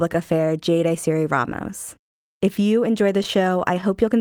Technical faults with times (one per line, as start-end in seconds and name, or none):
0.00-4.21 clock drift between sender and receiver
0.41-4.18 repeated timing corrections
3.23-3.84 scattered short gaps